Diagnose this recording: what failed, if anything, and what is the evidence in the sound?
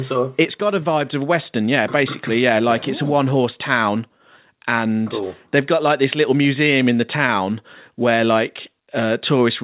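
Nothing failed; the call path sounds as expected.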